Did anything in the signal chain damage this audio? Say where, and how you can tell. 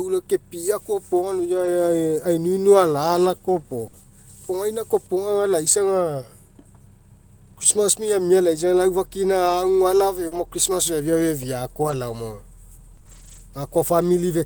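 Yes. Network: packets lost near 1.57 to 1.67 s were rebuilt from error-correction copies, so that 60 ms of speech sounds rougher and noisier, without a gap.

Network: a burst of packet loss at 3.87 to 3.95 s. The receiver stretched the last sound over 60 ms, then resumed with 60 ms of speech missing.

Network: scattered short gaps between 9.45 and 13.41 s, about four, each patched by continuing the last sound, causing brief ticks and hiccups of up to roughly 40 ms.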